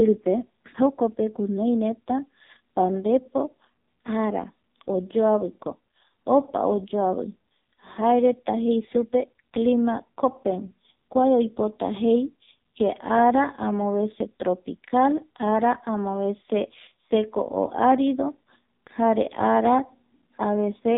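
From start to finish the speech sounds thin, buzzy and synthetic, with nothing above about 3.8 kHz and a coarse, robotic edge on every syllable. This is the AMR narrowband mobile codec (AMR-NB) at work: the signal is squeezed into an 8 kHz stream and rebuilt from a simple vocal-tract model fed by a few pulses per 5 ms slice. The heavy damage points to one of its lowest rates, around 6 kbps.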